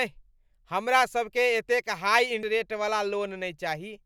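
At 2.43 s the compressed stream carries damaged data: a stretch of bytes in the encoded speech has been lost or corrupted, so the decoder cannot parse the frame it lands on. It misreads the garbage as audio, loses frame sync, and has to hunt forward for the next valid header before normal decoding resumes. The result is a single brief glitch that cuts across the speech at that instant.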